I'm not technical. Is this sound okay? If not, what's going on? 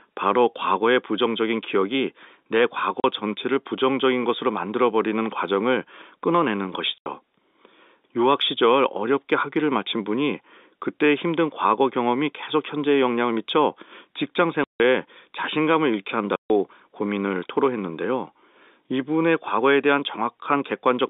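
No. Packet loss filled with silence cuts the speech at 3.00 s, 6.98 s, 14.64 s and 16.36 s. Each time, pieces of the audio never arrived and blank gaps of 40 to 160 ms took their place. The steady steps in the gap lengths fit 20 ms packets. The narrow telephone-band sound of the G.711 telephone coding is expected.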